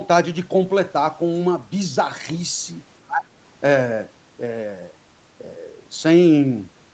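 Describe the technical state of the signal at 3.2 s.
At 3.2 s the speech sinks by roughly 20 dB between about 3.06 and 3.28 s. It's likely speech suppressed in double talk: with both ends talking, the echo canceller couldn't tell this talker from loudspeaker echo and turned both down.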